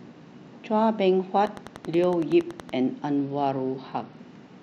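From 1.47 to 2.70 s a steady ticking runs over the speech and its pauses: about fifteen sharp, similar clicks at a regular 10.6 per second, peaking around 5 dB above the speech. This train of clicks likely comes from electrical interference or a faulty connection or power supply.

Between 3.17 and 4.19 s the treble dulls and a gritty noise rises under the speech. The cause is a Bluetooth SBC bit pool drop. The sound suggests a fall from a bit pool of 31 to about 10, near 77 kbps, which starves the upper sub-bands and coarsens everything else until the rate recovers.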